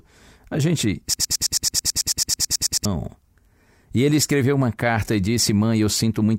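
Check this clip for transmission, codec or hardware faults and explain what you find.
One fault: a broken-record loop from 1.14 to 2.85 s. A 109 ms fragment of speech repeats sixteen times back to back, likely from a stalled player or stream resending its last buffer, so that span's real audio is lost. It sounds like a rapid stutter. On a waveform or spectrogram, identical blocks tile every 109 ms.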